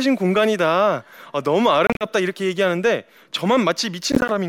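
Packets likely failed to reach the Bluetooth headphones in time and were dropped, so the speech breaks into short silent gaps. This Bluetooth dropout runs from 1.87 to 2.07 s, with about 98 ms missing across 140 ms, and again from 4.12 to 4.31 s as briefer 14 ms holes.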